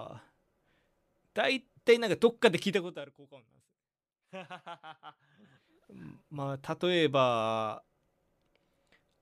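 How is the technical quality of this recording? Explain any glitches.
Nothing in this speech recording comes across as a glitch, so there's no fault to walk through here.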